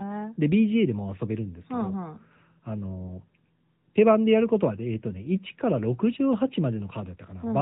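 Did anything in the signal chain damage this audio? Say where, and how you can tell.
Yes, at the codec stage: AMR narrowband mobile coding throughout. Nothing above 4 kHz survives, and speech sounds plainly buzzy and synthetic, which fits a mid-rate mode around 10 kbps.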